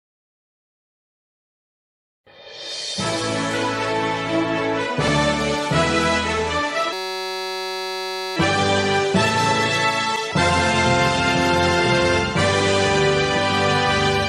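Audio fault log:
6.93–8.36 s, system hang loop: for about 1.4 s the sound freezes into a steady buzz, pitched at roughly 188 Hz. What's happening is that the machine stalled while the audio hardware kept replaying the same tiny slice of its ring buffer, a 5.33 ms chunk, which fits a 256-sample buffer, repeated 269 times back to back. A loop that short repeats so fast it fuses into a tone instead of a stutter, and the audio picks up again with next to nothing missing.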